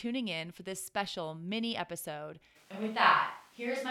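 From 2.57 s, after "this special mini episode", the speech turns hollow and roomy, likely a switch to a distant microphone; the spectrogram's lows thin out and smear.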